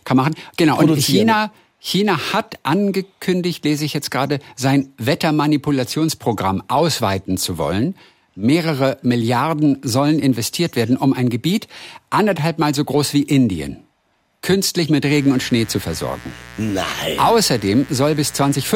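From 15.01 s to the end at 18.75 s, mains buzz appears: a steady, raspy buzz about 20 dB below the speech. Switching spikes at twice the 60 Hz mains rate leak in, drawing evenly spaced horizontal harmonic lines reaching into the kilohertz range on a spectrogram.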